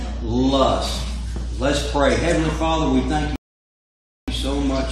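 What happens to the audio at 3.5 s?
A rebuffering stall runs from 3.36 to 4.28 s: playback starved of data goes silent for 0.92 s, then resumes exactly where it stopped, losing nothing, unlike a dropout.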